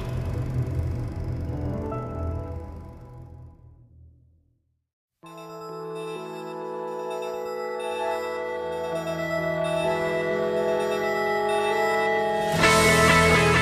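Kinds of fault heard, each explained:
Mains buzz: a steady, raspy buzz enters at about 9.84 s and runs to the end of the clip at 13.61 s, sitting roughly 20 dB below the wanted sound. It comes from sharp switching spikes, twice per 50 Hz cycle, leaking in through a dimmer, rectifier or poor shielding. On a spectrogram it shows as a ladder of evenly spaced horizontal lines at multiples of 50 Hz, climbing into the kilohertz range; the waveform carries a repeating spiky pattern every 10 ms.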